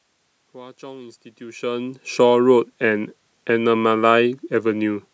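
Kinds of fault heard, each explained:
Nothing stood out on listening to this speech recording; the level change around 1.5 s comes from the talker moving relative to the microphone.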